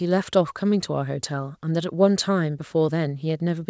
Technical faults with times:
none

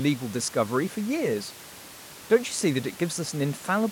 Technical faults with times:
none

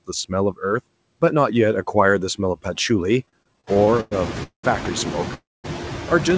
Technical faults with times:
0.00-6.37 noise suppressor artifacts
3.26-4.13 repeated stalls (stutter)
4.43-4.65 call audio freeze
5.34-5.66 call audio freeze

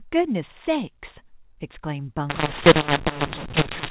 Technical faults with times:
2.30-3.90 mu-law and A-law mixed up

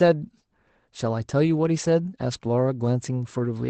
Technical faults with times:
1.43-1.49 lost packet rebuilt from error correction

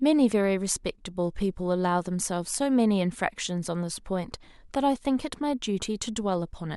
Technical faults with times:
none

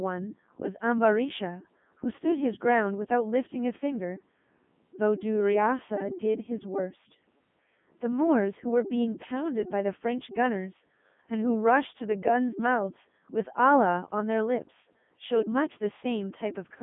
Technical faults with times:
0.00-16.82 Codec 2 vocoder

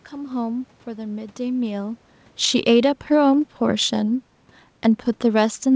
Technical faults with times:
2.30-4.30 automatic gain falling
2.75-3.15 automatic gain rising

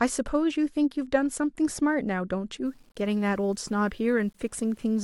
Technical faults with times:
2.66-5.03 low bit depth without dither

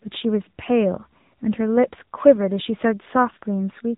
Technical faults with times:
0.00-3.98 AMR narrowband mobile codec

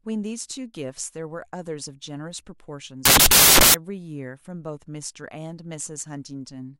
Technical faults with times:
3.05-3.74 samples built from the wrong bytes

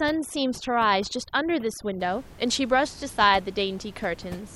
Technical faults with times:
0.00-2.00 overdone noise removal

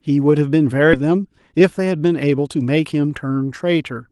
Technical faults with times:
0.93-0.95 skip ahead
1.03-3.23 jitter buffer speed-up

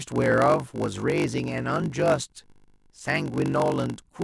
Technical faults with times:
0.00-4.24 block size mismatch (padded)

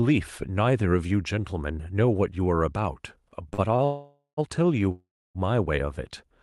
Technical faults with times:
3.49-3.81 short stall from a late packet
3.85-4.39 call audio freeze
4.91-5.37 call audio freeze

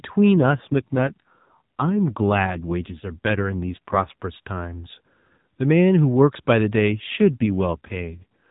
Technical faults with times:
0.37-4.23 AMR rate drop
6.92-8.50 AMR rate drop

